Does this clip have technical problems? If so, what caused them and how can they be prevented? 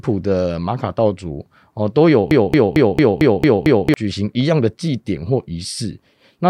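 Yes. A broken-record loop runs from 2.31 to 3.94 s: a 0.22 s fragment of the speech repeats exactly, back to back, seven times, and the audio that belonged there is lost. The likely cause is a stalled player, encoder or stream that kept resending the last fragment it held. Watching for stalls and having the player resync or fall silent rather than replay stale buffer contents prevents it.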